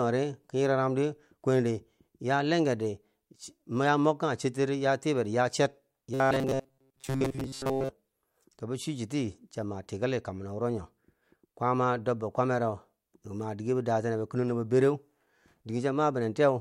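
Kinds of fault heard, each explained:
Robotic sound from repeated short buffers: from 6.14 to 7.89 s the speech collapses into a stiff, metallic buzz fixed at 134 Hz. It still roughly follows the syllables. The likely cause is audio arriving too seldom, so playback keeps looping a tiny slice of what it last had, which fits a slice of about 7.5 ms. This repetition fills most of that stretch while the real audio is skipped.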